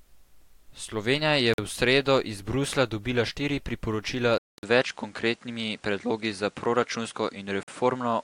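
Gap between chunks at 1.54 s (just before "v sredo iz"), 4.58 s and 7.63 s: hard-edged holes of about 48 ms recur every 3 s, where chunks of this speech recording were joined with silence between them. Input switched to a poorer device at 4.38 s, after "dobila štiri priporočila": following a 200 ms silence, the sound turns duller, with nothing above 10.5 kHz and a new noise floor roughly 35 dB down at unchanged loudness, likely from the recording moving to a lesser microphone.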